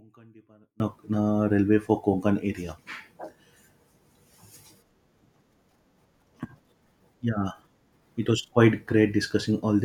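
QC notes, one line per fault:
0.0 to 0.8 s, one channel inverted: the speech nearly disappears when the stereo is folded to mono, dropping by about 32 dB and leaving only a faint trace of the difference between the two sides. The likely cause is reversed polarity on one channel, so the centred voice, present equally in both, cancels itself in the sum, and the low end goes with it.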